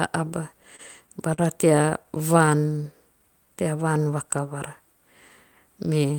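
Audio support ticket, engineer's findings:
Repeated stalls (stutter), 0.63–1.40 s: four short holds, about 84 ms filled in total, longest 40 ms. Packets arriving late, so the jitter buffer runs dry and the receiver extends the last sound until data resumes. Nothing lost, but the flow drags.

Repeated stalls (stutter), 1.90–2.49 s: five holds, about 50 ms filled, none longer than 13 ms. Same jitter buffer underrun pattern, shorter waits.

Jitter buffer slow-down, 2.31–4.05 s, overlapping the second stutter: playback stretched to 92% speed, about 141 ms added, pitch unchanged. The buffer was low or had raised its target delay, so the receiver repeated single pitch periods and slices of pauses to rebuild its reserve. Sounds drawn out, pace slower across the span.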